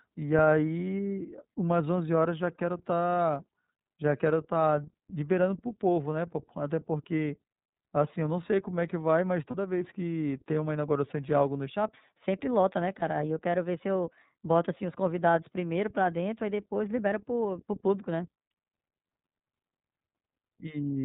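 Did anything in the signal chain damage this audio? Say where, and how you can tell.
Yes. Codec stage: the whole clip is band-limited below 4 kHz, with a rough, synthetic edge. That fits the iLBC codec at 13.33 kbps with 30 ms frames.

Network stage: lost iLBC frames at 9.50–9.56 s and 12.99–13.03 s. Each gap is a brief buzzy held vowel, consistent with one concealed 30 ms frame. Recovery is immediate.

Playback or editing stage: a section at the wrong speed runs from 11.68 to 18.50 s. It plays 1.18 times fast, about three semitones high. The likely cause is a clock mismatch.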